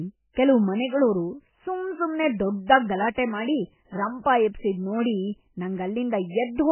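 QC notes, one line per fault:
Throughout, MP3 compression: the audio is heavily damaged, with nothing above 3 kHz, a watery, swirling texture and smeared attacks. This fits a very low bitrate, around 10 kbps, likely from an MP3 encoder short of bits that cuts the treble and drops weak frequency lines that flicker between frames.
3.14 to 3.18 s, pre-echo: a short hiss runs for about 32 ms just ahead of a sharp attack, which sounds softened. The codec spreads quantisation noise across its whole block, so noise sized for the loud onset spills into the quiet moment before it.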